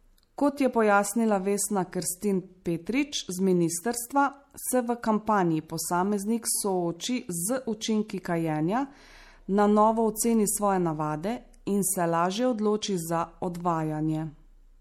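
Speech with likely MP3 compression throughout, consistent with a low bitrate near 64 kbps. Starved of bits, the encoder drops weak frequency lines, leaving a plainly watery, swirling sound.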